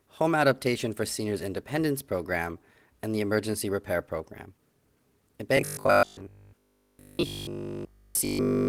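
From 5.57 s to the end of the clip, the speech collapses into a rigid, metallic buzz at 50 Hz, with essentially all of the sound from that point replaced by it. The likely cause is repeated short buffers: new audio arrives too seldom, so the last short slice is played over and over, and a 50 Hz buzz fits a 20 ms buffer. Unlike the light damage from the Opus voice coding, this imposes one fixed pitch.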